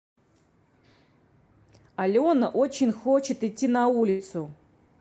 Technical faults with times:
4.09-4.21 burst of packet loss

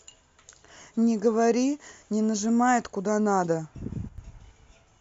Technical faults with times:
4.09-4.18 sudden gain jump

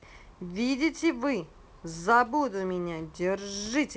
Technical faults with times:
none

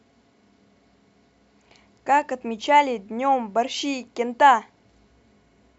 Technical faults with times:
none

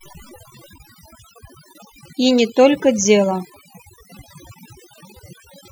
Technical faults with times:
0.00-5.72 overdone noise removal

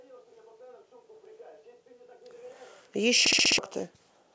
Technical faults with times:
3.26-3.58 system hang loop

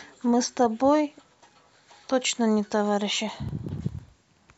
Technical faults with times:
3.29-4.49 periodic USB or driver dropouts

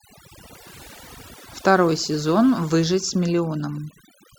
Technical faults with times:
0.00-4.39 overdone noise removal

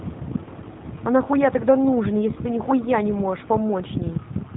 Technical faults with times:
0.00-4.56 G.729 codec

